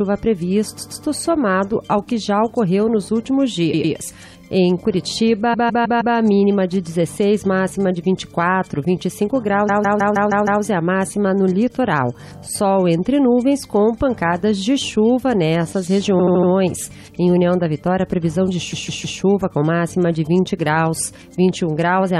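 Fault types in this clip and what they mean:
Repeated frames: short blocks of the compressed stream play again two to six times in a row, so the sound stutters, at 0.77, 3.72, 5.53, 9.68, 16.18 and 18.72 s. Each block lasts 78 to 157 ms, which fits whole frames of about 26 ms, and the clip grows by roughly 2.8 s in all. Unlike a dropout, nothing goes missing; the same slice simply returns.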